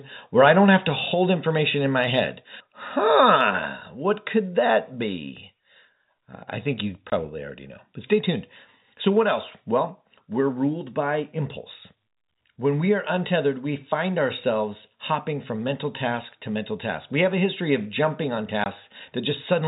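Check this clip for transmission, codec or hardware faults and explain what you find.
Three kinds of fault turn up in this speech clip: a brief overload, two sudden level drops, and two short silent dropouts. The narrowband telephone coding underneath leaves nothing above 4 kHz, with at most faint coding damage.

Microphone overload, 0.43 to 0.48 s, just before "don't have to". A harsh, crackly edge sits on the loudest peak, about 2 dB over full scale. The likely cause is input gain set too high, so the converter flattens the peak tops. On the waveform these show as squared-off crests, and the spectrogram shows a short burst of broadband splatter.

Microphone volume stepped down, at 1.14 s and 3.36 s. The first falls between "don't have to" and "information in my head". Voice and background drop together by about 3 dB each time, likely because software lowered the input volume after the overload. 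The waveform envelope shrinks in a clean step, and the spectrogram dims uniformly across frequency.

Packet loss filled with silence, at 7.1 s and at 18.64 s (the second right after "history of jumping on"). Each gap lasts 20 ms, which fits one lost packet replaced by silence. The waveform shows a flat line between hard cuts, and the spectrogram shows a thin blank vertical strip.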